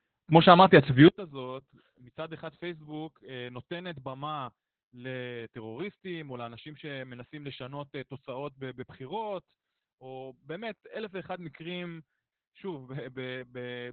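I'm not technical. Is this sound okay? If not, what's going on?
No, it has two problems.

The first runs through the whole clip. It is Opus voice compression, squeezed very hard. The speech sounds muffled and a little hoarse, with a slightly robotic edge. Everything above about 4.4 kHz is gone, so the crisp, airy part of the sound is missing. To save space, the codec kept only a narrow, phone-like band and a rough sketch of the voice's texture.

The second starts at about 1.08 s and lasts to the end. The speech suddenly drops to a small fraction of its earlier volume. The likely cause is one channel inverted: one side of a stereo recording has been flipped upside down. When the two sides are played together as one, the parts they share cancel out. The voice sits in both sides, so most of it disappears.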